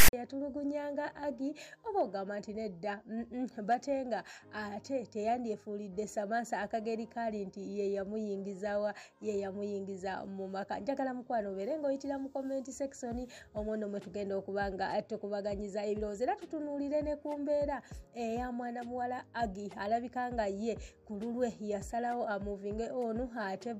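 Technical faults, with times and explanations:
0.00–0.13 s, file tags played as audio: the opening 0.13 s is a block of text tags with zero padding read as if it were samples. The text bytes sound like a harsh, loud rasp pushed off-centre, because character codes are mostly positive values, giving a DC offset. The padding then drops to dead silence. On the waveform this shows as a hard-edged, lopsided block followed by a flat line. On the spectrogram it is a broadband smear with abrupt vertical edges.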